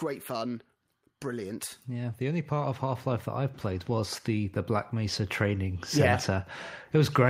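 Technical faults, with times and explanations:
1.26 s to the end (7.29 s), automatic gain rising: the automatic gain control judged the input too quiet and kept raising its gain, so the speech and the background noise swell together, unlike a talker simply speaking louder, where the background would stay put.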